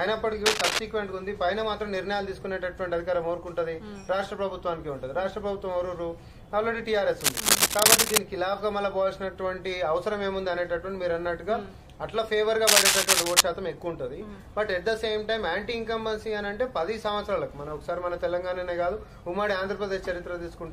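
Cable scratch noise at 0.46 to 0.79 s, 7.21 to 8.18 s and 12.67 to 13.41 s: harsh scratchy bursts, about 5 dB above the sound and nearer 10 dB in the last, likely from a worn connector being moved.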